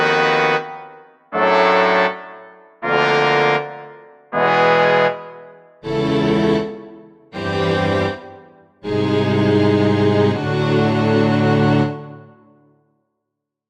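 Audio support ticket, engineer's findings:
No faults identified on review; no dropouts, distortion, timing or level anomalies heard anywhere in the clip.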